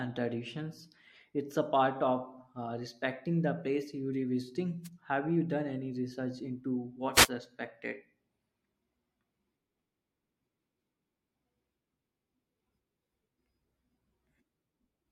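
At 4.83 s and again from 7.13 to 7.29 s, the speech is briefly marred by a wireless microphone noise hit. The FM radio link fades as reflected signals cancel, and the receiver's hiss rises into a swish of static. It lasts about 50 ms, then about 160 ms. Unlike a digital dropout, the sound is never cut to silence. Noise rushes in over it and clears again.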